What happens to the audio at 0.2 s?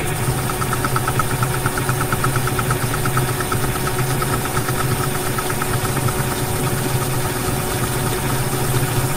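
Nothing goes wrong at 0.2 s; the audio plays through that moment intact, with no dropout, click or distortion.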